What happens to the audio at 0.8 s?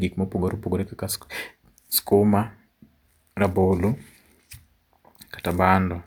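Nothing goes wrong at 0.8 s; the speech plays through that moment intact, with no dropout, click or other fault.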